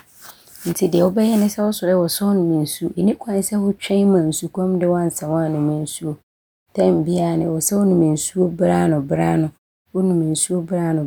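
Nothing in the speech stood out as a technical problem on listening.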